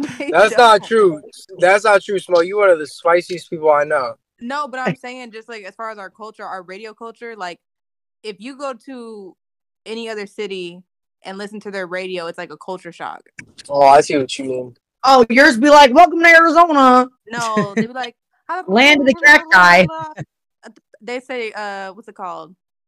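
At 13.36 to 13.42 s and again at 18.03 to 18.06 s there's a quick glitch from damaged data in the compressed stream. Bad bytes there trip up the decoder, which loses frame sync and has to hunt for the next valid header.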